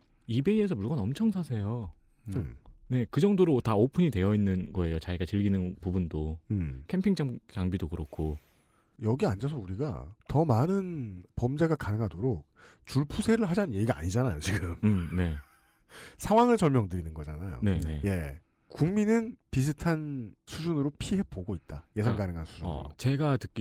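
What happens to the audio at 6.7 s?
At 6.7 s the speech plays through intact, with nothing going wrong at that moment.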